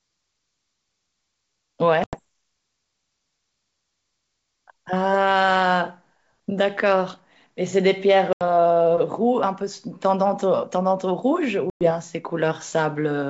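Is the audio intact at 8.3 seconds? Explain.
No. Packet loss on an ADPCM call cuts out the audio from 8.33 to 8.42 s, with about 80 ms lost across several packets. The gap is filled with silence, leaving an abrupt hole. The decoder's adaptive predictor and step size then no longer match the sender's, so the G.722 wideband sound comes back with slight distortion before settling within a few tens of milliseconds.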